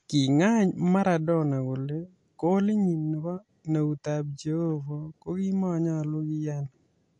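Throughout, the speech sounds watery and swirly with nothing above 11.3 kHz, likely MP3 compression at a bitrate near 48 kbps; flickering dropouts distinguish it from a plain low-pass filter.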